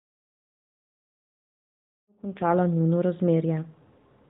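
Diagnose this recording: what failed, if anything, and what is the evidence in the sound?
An AMR rate drop hits the speech from 1.45 to 2.54 s, at the codec stage under network control. The band stays the same and nothing cuts out. The sound turns rougher and more synthetic, which fits a switch from 12.2 to 5.9 kbps.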